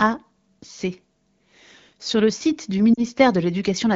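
Lost AMR speech frames at 2.94 to 3.04 s: corrupted radio data left about 40 ms unusable, which fits two dropped frames, so the wideband decoder stretched the last good pitch and vocal tract settings with falling gain, producing a brief smeared, fading dip.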